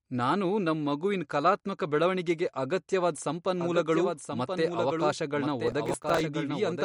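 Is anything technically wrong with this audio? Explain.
Yes, three faults can be heard.

Throughout the speech there is a watery, swirling quality, and nothing is present above 11.2 kHz. This is likely MP3 compression at a low bitrate, around 48 kbps. Short of bits, the encoder cuts the treble at a fixed frequency and drops weak spectral lines, which flicker on and off from frame to frame. The damage is plainly audible. Because the top edge is a hard, constant cutoff rather than a gentle roll-off, this is codec damage and not simple low-pass filtering.

From 3.61 s, right after "ಮಗುವಿನ್ ಕಲಾತ್ಮಕ ಬೆಳವಣಿಗೆಗೆ ಅಗತ್ಯವಾದ್", a doubled audio track starts abruptly and continues to the end. A second full-band copy trails by roughly one second at about 5 dB below the original. The likely cause is a slower second capture path or a misaligned edit. Unlike an echo or reverb, the copy has no decay and no room colour. 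It is a clean duplicate with a fixed offset.

From 5.67 to 6.21 s there is processor overload crackle, a gritty tearing that rides on top of the speech. The processor missed many small audio buffers in a row, around fifteen of roughly 5 ms each, and each miss replayed a fragment of old audio with hard edges. A single dropout would give one click. This is a dense run of defects that stops as soon as the load passes.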